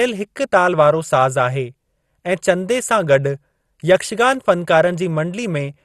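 MP2 compression throughout this speech clip: nothing above 12.2 kHz survives, and the upper sub-bands flicker with gurgling, granular grit, likely from a low bitrate near 64 kbps.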